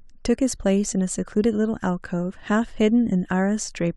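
At about 0.55 s the speech jumps forward, and that's a case of compressed frames skipped. A chunk of the encoded stream never got played, either because it was missing or because the decoder rejected it as corrupt. You lose roughly 20 ms of audio, which fits a single frame of around 23 ms.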